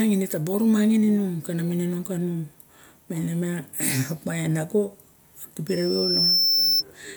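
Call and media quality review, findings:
Loudspeaker feedback squeal, 5.68 to 6.83 s. A pure tone at 5.3 kHz swells over roughly 0.7 s to about 5 dB above the speech. Probable component: open mic picking up its own loudspeaker. Loop gain exceeds unity at that frequency.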